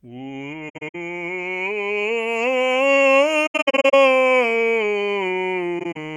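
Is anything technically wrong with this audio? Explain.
Yes, the music has three bursts of AAC frame loss with muting, at 0.69–0.95 s, 3.46–3.94 s and 5.79–5.97 s. Lost frames were decoded as silence, and the overlapping windows fade each gap out and back in, so you hear soft-edged dropouts. The longest runs are around 70 ms, about a tenth of a second, and around 40 ms.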